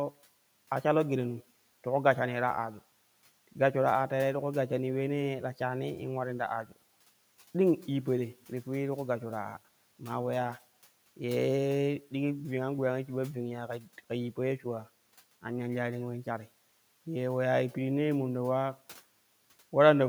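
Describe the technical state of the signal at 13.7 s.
From 13.68 to 14.0 s the speech sounds swallowed and faint, dropping about 9 dB: speech cut by the noise suppressor, which mistook it for background noise.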